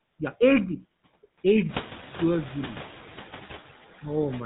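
Noise suppressor artifacts run through the whole speech clip. The suppressor estimates which frequency bands hold steady noise and pulls them down frame by frame, by about 6 dB here. The background therefore ducks in the gaps and swells back under the talker, leaving a fluctuating residue. The room noise steps up by about 14 dB around 1.5 s, still roughly 18 dB below the speech. On a spectrogram the noise floor looks patchy and mottled, with isolated bins flickering on and off between syllables rather than forming an even haze.

The GSM full-rate codec damage is also present from start to finish, and it is plainly audible. The codec rebuilds the voice from a vocal-tract filter fed by a sparse, regularly spaced pulse train. This gives the speech a buzzy, gravelly edge, and sibilants lose their crispness. The texture fits a 13 kbps narrowband telephone stream. A spectrogram shows a hard ceiling at about 3.8 kHz with nothing above it, and the harmonics below look smeared and grainy.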